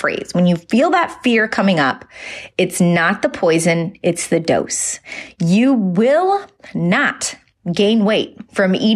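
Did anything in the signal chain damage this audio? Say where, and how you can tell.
No, nothing along the chain seems to have damaged this speech recording, and there's no problem that can be pinned on any one stage.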